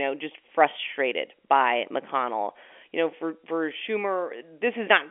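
No technical faults are present.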